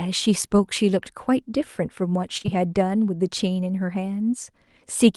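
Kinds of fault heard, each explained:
Short concealed packet loss, at 2.37, 2.42 and 2.46 s, running to about 2.50 s: three consecutive 20 ms chunks of the speech failed to reach the decoder in time. The receiver papered over each hole by extending the preceding sound, following its pitch when voiced or substituting shaped noise otherwise, then blending back into the real signal. Chained together, they leave a smeared, wobbling patch lasting roughly an eighth of a second.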